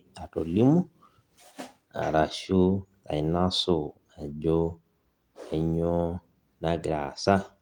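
No faults can be heard anywhere in this recording.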